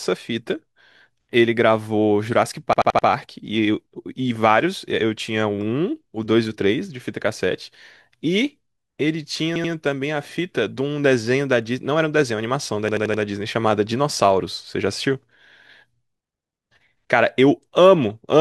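Hard-edged stutters at 2.73–3.07 s, 9.56–9.73 s and 12.89–13.23 s: a repeated buffer, where an 85 ms slice replays when fresh audio arrived late, which fits a 4096-sample buffer.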